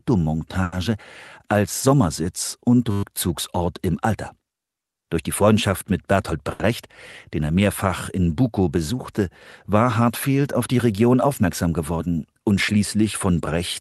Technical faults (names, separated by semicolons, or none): short stall from a late packet; system hang loop; jitter buffer speed-up